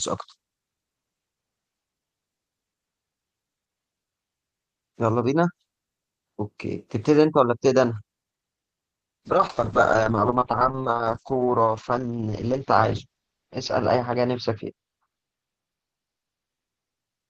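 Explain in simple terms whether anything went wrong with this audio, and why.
From 9.26 s to the end, a call bitrate drop: the encoder got far fewer bits, so speech turns coarse and muffled as high frequencies disappear.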